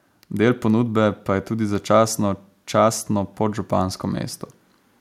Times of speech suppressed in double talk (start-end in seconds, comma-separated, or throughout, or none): none